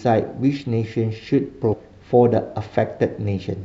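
At 1.72 to 1.74 s, compressed frames were skipped, roughly fifteen 23.2 ms frames, so the speech jumps ahead about 0.4 s.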